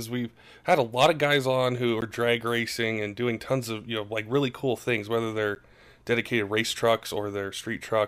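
It's a speech clip with two blocks of digital silence: a 12 ms one at 2.01 s, after "of guys on who", and a 10 ms one at 5.55 s, before "dedicated race". The audio drops straight to zero and back, so each is short enough to come across as a tick or dip rather than silence, likely from the output buffer not being filled in time.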